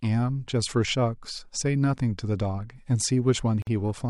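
The speech recording was built from separately encoded pieces that were joined without trimming the encoder's start-up delay and last-frame padding, leaving a gap at a join of encoded pieces. At 3.62 s the talking stops dead for about 48 ms, until 3.67 s, a short hole of silence with sharp edges that the codec blurs, and then the speech resumes exactly where it broke off, with nothing lost.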